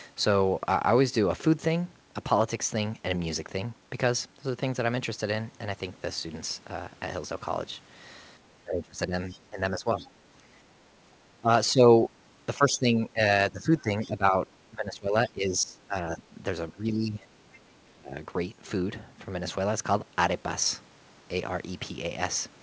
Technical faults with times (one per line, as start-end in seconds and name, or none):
8.64-10.02 speech suppressed in double talk
9.31-9.39 other side's voice leaking through
9.99-10.08 other side's voice leaking through
11.41-11.84 speech suppressed in double talk
12.56-17.27 speech suppressed in double talk
13.78-14.07 other side's voice leaking through
17.53-17.78 other side's voice leaking through
17.95-18.15 speech suppressed in double talk